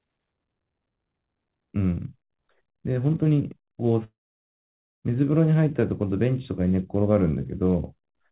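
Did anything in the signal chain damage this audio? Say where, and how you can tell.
Yes. De-emphasis applied wrongly, from 0.33 s onward: a needless treble cut slopes the response smoothly down, about 11 dB at 10 kHz, muffling the speech.

Long network dropout, 4.04 to 5.05 s: packets likely stopped arriving, so the receiver's fading fill gives way to silence, and the missing speech never returns.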